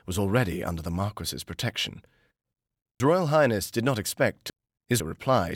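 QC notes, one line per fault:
3.0–5.0 s, chunks out of order: a 500 ms chunk lands three chunks late, so this stretch plays jumbled. Nothing's missing, just shuffled, and there are three hard joins where mismatched pieces butt together.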